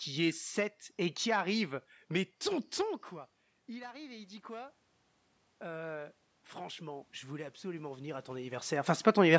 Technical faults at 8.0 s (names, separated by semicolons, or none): automatic gain rising